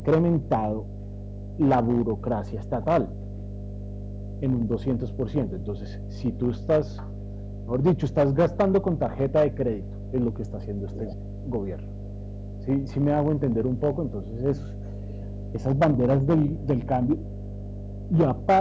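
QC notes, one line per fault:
Throughout: mains hum. Power-line current is getting into the signal path, most plausibly through a ground loop or a transformer near the equipment, and it adds a steady 50 Hz tone with a few low harmonics. The hum sits only a few dB below the speech, so it is nearly as prominent as the talker. It forms a constant drone under every phrase and fills the pauses between them.
Throughout: hard clipping. A stage in the chain is driven about 9 dB past what it can pass, so the loudest peaks, a couple of percent of the samples, are sliced flat. The squared-off tops generate harmonics well up the spectrum, heard as a harsh, gritty fuzz on stressed syllables and louder passages.
3.21–3.4 s, 9.91–9.99 s, 10.9–11.5 s, 12.0–12.65 s, 14.62–15.45 s, 17.18–18.09 s, 18.42–18.46 s: echo leak. A far end playing the call on a loudspeaker likely had an echo canceller that failed to remove all of the speech its microphone picked up, and the residue came back. 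It is heard as a copy of the speech trailing 476 ms behind. Most of these are faint, but the copy at 10.9–11.5 s is distinctly audible.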